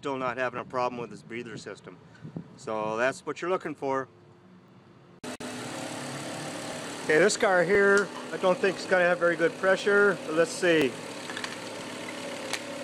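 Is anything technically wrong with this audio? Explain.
Yes. From 0.59 s to 11.84 s there are periodic USB or driver dropouts, about ten in all, spaced 1.02 s apart. Each time, something blocks the USB bus or audio driver and around a millisecond of audio is skipped, so the waveform jumps straight from one point to a later one. Each jump is heard as a short tick or pop at a steady rhythm, audible only where sound is present.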